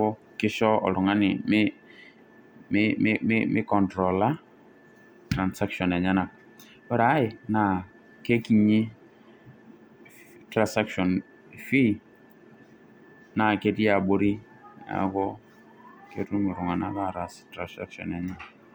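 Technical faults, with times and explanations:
Nothing stood out on listening to this speech recording.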